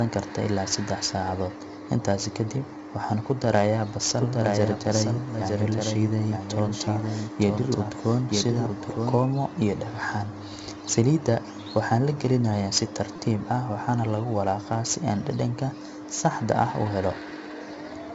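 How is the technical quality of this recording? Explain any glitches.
The recording has three distinct problems: heavy codec grit throughout, a second copy of the speech for five seconds, and two brief stutters.

4-bit ADPCM compression runs through the whole clip. Each sample is coded as a coarse 4-bit step from a prediction, so the error rises and falls with the speech as a gritty hiss, roughening consonant attacks. The damage is heavy, and nothing sounds above 7.7 kHz, consistent with a rate around 64 kbps.

A doubled audio track runs from 4.18 to 9.18 s, starting just before "iyo dhagaxan". A full-band copy of the speech trails about a second behind, a few dB quieter, with no room colour. It starts and stops abruptly, likely from a second, slower capture path being mixed in.

A repeated buffer occurs at 6.85 s and again from 13.16 to 13.18 s. New audio arrived late, so the last 5.8 ms block, which fits a 256-sample buffer, played again three and then four extra times. 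Each time, roughly 20 ms of speech is lost and replaced by a short buzzing stutter.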